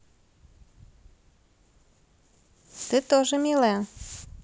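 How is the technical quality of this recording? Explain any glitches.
No glitches or faults are audible.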